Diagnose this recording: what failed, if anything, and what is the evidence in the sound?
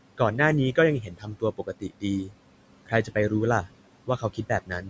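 Noise suppressor artifacts run through the whole clip, from the call-processing stage. Frame by frame, the suppressor pulls down the bands it judges to be steady noise, so the room noise, about 17 dB under the speech, dips between phrases and returns beneath them.

Speech cut by the noise suppressor occurs at 1.02–2.04 s, 2.24–2.33 s, 2.86–3.31 s and 4.07 s to the end. The suppressor mistook quiet speech for noise and turned it down by about 19, 11, 15 and 17 dB respectively, leaving softer sounds swallowed across roughly half a second at most.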